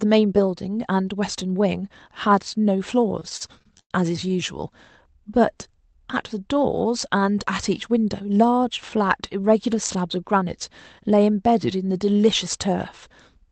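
Between 3.19 and 3.92 s the speech shows repeated stalls (stutter). The jitter buffer ran dry nine times as packets arrived late, and the receiver stretched the last sound to cover about 232 ms, close to a third of that span. The longest gap was 99 ms. Nothing is lost, but the speech drags and catches.

From 5.15 to 6.01 s a jitter buffer slow-down is audible. To rebuild its reserve, the receiver repeated single pitch periods, adding 65 ms and playing at 93% speed. Syllables sound drawn out at unchanged pitch.

From 8.21 to 8.52 s a jitter buffer speed-up follows. The buffer held excess audio, so the receiver cut short pitch-period pieces totalling around 40 ms. The speech runs at 109% speed with the same pitch and sounds briefly hurried.

Throughout, the call codec path limits the audio to an 8 kHz band, which fits Opus at a modest bitrate around 32 kbps.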